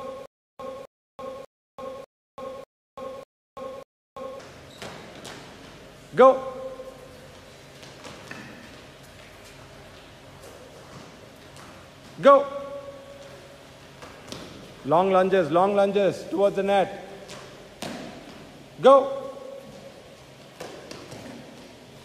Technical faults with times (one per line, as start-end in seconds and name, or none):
0.00-4.40 stutter with silent gaps